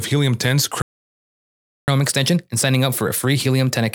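A playback stall runs from 0.82 s to 1.88 s. The speech cuts off mid-flow and the output falls completely silent for about 1.06 s before the sound resumes. A gap this long with nothing at all in it is most likely the player running out of buffered data, or its playback thread being held up, so it had nothing to send to the output until it recovered.

Catch-up at higher speed follows from 1.88 s through to the end of the clip. Having fallen behind during the stall, the player works through its backlog by resampling at 1.1 times normal rate. Because it speeds up by resampling rather than time-stretching, the pitch rises with the tempo, by roughly a semitone and a half. The speech sounds slightly hurried and higher, and it doesn't drop back to normal before the clip ends.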